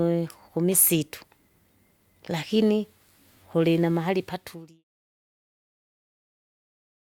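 No technical faults found on the speech; the level eases down in a smooth editorial fade-out from around 4 s to 4.85 s, with no click or hard edge at the end.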